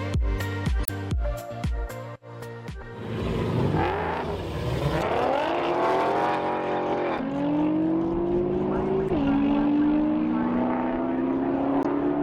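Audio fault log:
0.83–0.90 s, 4.99–5.03 s, 7.15–7.20 s, 9.06–9.10 s and 11.80–11.86 s: damaged data in a compressed stream. Each event is a brief chirp or blip lasting about 40 to 75 ms. Bytes in the coded stream are wrong at these points. The decoder misreads those frames and loses sync. It then hunts for the next valid frame header. The garbled output during that search is the short burst heard.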